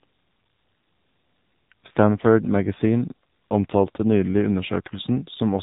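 AMR narrowband mobile codec damage runs through the whole of this speech clip: everything above 4 kHz is gone, and the voice has a plainly audible buzzy, synthetic quality. That fits a low 7.4 kbps mode, where a vocal-tract model excited by sparse pulses per frame rebuilds the speech.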